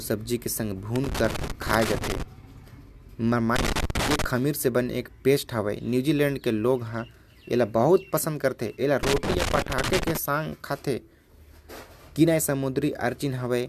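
Loose connector crackle breaks into the speech from 0.96 to 2.22 s, 3.56 to 4.24 s and 9.03 to 10.17 s. A worn contact keeps making and breaking, chopping the signal into irregular scratchy bursts. On a waveform these show as dropouts and sharp spikes, and on a spectrogram as broadband vertical streaks.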